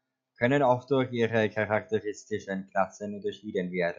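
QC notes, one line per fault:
No faults heard in this speech recording.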